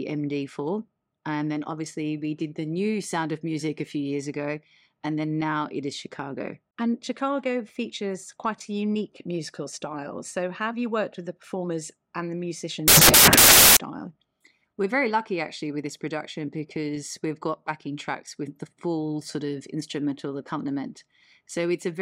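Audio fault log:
12.88–13.77 s, samples built from the wrong bytes: for 0.89 s the speech becomes loud, harsh broadband noise, because each sample's bytes are misassembled, shifted or swapped, so the rapidly changing low bits land in the high-order position.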